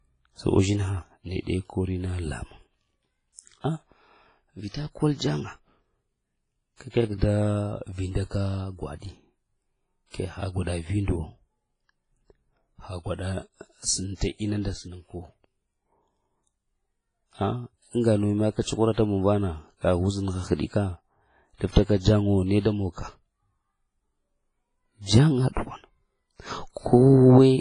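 Right through the speech there's heavy WMA compression, likely a 24 kbps encode: washy, ringing highs with a hiss that swells with the voice, and nothing above 10.3 kHz. Pre-echo shows up at 4.68 s, at 18.92 s before "muŋ vana", at 21.71 s before "jaŋa wo", and at 22.60 s before "da monka". In each case the codec block spreads its noise into the quiet just before a sharp attack, so you hear a brief hiss of about 46 to 59 ms and a softened onset.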